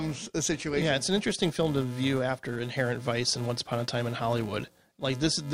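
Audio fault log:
Throughout: filter restarted on every block; each block starts from cleared state, giving transient heard as 375 Hz buzz following speech level, fitting 128-sample blocks.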